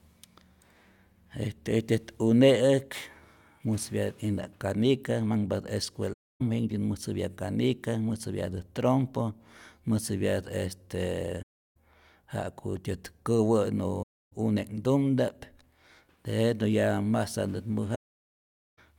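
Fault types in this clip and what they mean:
AAC frame loss with muting: chunks of coded audio went missing and the decoder filled them with silence, so the speech fades out and back in with soft edges. It happens four times, with gaps of roughly 0.28 to 0.34 s and a longer 0.83 s hole near the end.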